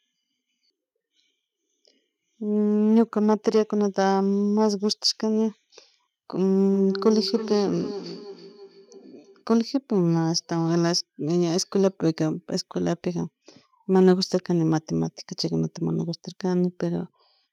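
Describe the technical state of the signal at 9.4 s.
At 9.4 s you're in the tail of a feedback echo between two devices, running 6.73 to 9.46 s: a second device replays the speech, the mic catches it, and it returns roughly every third of a second, about 10 dB down.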